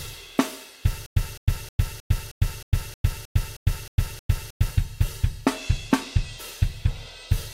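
From 1.06 s to 4.71 s there is a stutter with silent gaps. A short burst of about 210 ms plays, then about 102 ms of dead digital silence follows. The same burst returns every 313 ms, eleven times in all. The even pace makes it sound mechanical. The likely cause is a stalled player or stream that replayed its last fragment at each retry and then ran dry. Whatever should have played during that stretch is missing.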